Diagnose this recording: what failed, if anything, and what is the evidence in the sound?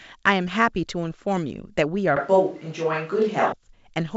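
The close microphone's feed most likely dropped out at the capture stage, so from 2.17 s to 3.53 s the speech comes from a distant microphone instead. The voice turns hollow and roomy at once, thinner in the low end, with background noise coming up to roughly 35 dB below the speech. The overall level stays about the same. The close sound returns abruptly at 3.53 s. Throughout, the G.722 wideband coding band-limits everything to about 7.7 kHz.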